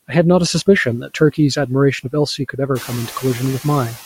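Noise suppressor artifacts run through the whole speech recording: the suppressor pulls steady background down by about 8 dB frame by frame, so the noise sinks between the words and rises under them. Speech cut by the noise suppressor occurs between 0.85 and 1.38 s, dipping about 10 dB, and between 2.38 and 2.69 s, dipping about 15 dB. In each stretch, roughly a tenth of a second of quiet speech was mistaken for noise and swallowed. The room noise climbs about 16 dB around 3 s, still sitting about 15 dB under the speech.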